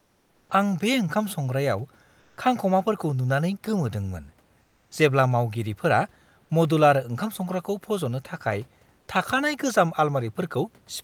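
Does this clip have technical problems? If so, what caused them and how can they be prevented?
Yes. The clip has comfort noise in place of the background, from 0.00 to 0.49 s, 2.19 to 2.37 s and 4.61 to 4.91 s. In those pauses the real room noise, which sits about 39 dB below the speech, gives way to a steady, featureless noise about 3, 2 and 5 dB quieter. The likely cause is discontinuous transmission, consistent with Opus DTX: the sender goes quiet when no speech is detected, and the receiver fills the gap with synthetic noise. A noise gate would drop to near silence instead, but here a smooth, textureless bed remains. To prevent it, disable DTX on the sending codec, or accept the extra bitrate of sending the real background continuously.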